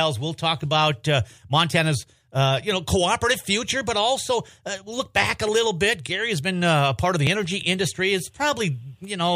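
At 5.49 s and again at 7.27 s the sound jumps abruptly. These are likely dropped buffers (overrun): samples were overwritten before the program read them, so a few milliseconds went missing and the audio on either side was spliced together with no gap. On a waveform each point shows a sudden discontinuity in amplitude and phase. A spectrogram shows a thin vertical broadband line at both times.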